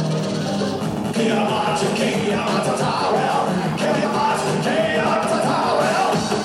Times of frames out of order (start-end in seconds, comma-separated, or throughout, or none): 0.97-1.12, 3.85-4.05, 5.05-5.25